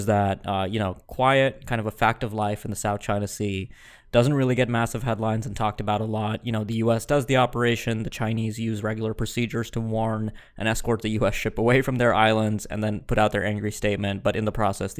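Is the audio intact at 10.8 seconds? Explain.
Yes, the speech at 10.8 seconds plays through intact, with no dropout, click, distortion or other fault at that moment.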